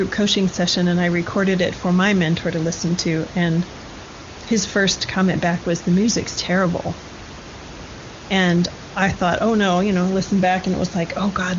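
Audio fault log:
No faults found; room noise sits about 16 dB below the speech and the HD Voice coding at 23.85 kbit/s leaves the speech clear.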